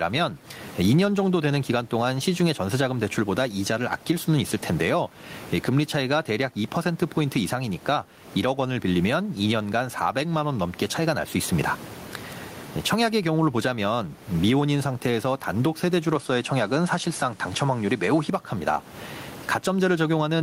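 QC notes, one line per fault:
Throughout, gain pumping: the gain is pulled down on each loud syllable, a swing of around 20 dB. That's likely a fast limiter reacting to input gain set far too high, so the speech sounds squashed and level. The room noise sits about 32 dB under the speech.
16.15 to 18.30 s, input switched to a poorer device: the tone suddenly turns duller with nothing above 11.4 kHz, the level shifts by a few dB, and a fresh noise floor sits roughly 30 dB down. There's no gap at the switch, and it clears up again afterwards, likely a brief jump to another microphone or a headset.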